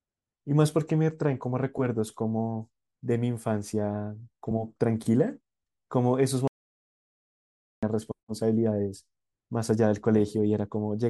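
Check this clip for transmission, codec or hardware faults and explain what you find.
An audio dropout to silence runs from 6.48 to 7.83 s, cutting the speech off mid-flow for about 1.35 s. The input was likely lost, through a disconnected device, failed link or mute, while recording continued writing silence, so the gap is dead silence without room tone, and that stretch of speech is gone.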